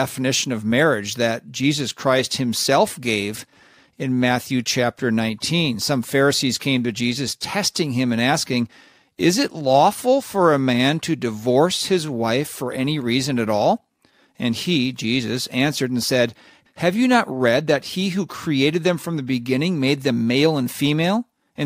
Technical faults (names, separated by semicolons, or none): clock slip clicks